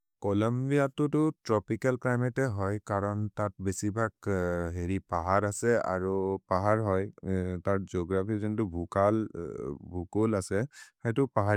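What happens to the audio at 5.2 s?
Nothing goes wrong at 5.2 s: the speech carries on intact through that moment, with no dropout, click or distortion.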